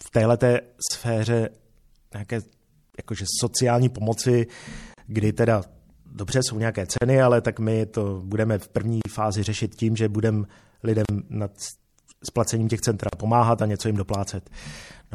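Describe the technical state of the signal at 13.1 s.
A gap at a join of encoded pieces opens from 13.09 to 13.13 s, between "splacením těch centra" and "pomáhat a něco jim". About 38 ms of silence cuts in, its edges smeared by the codec. Separately encoded pieces were joined without trimming encoder delay and padding. Such breaks recur every 2 s. Throughout, the speech sounds watery and smeared. That points to MP3 compression, likely a 64 kbps encode.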